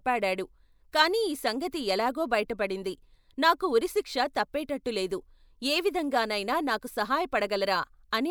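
No technical faults can be heard anywhere in the recording, and the signal stays steady and continuous throughout.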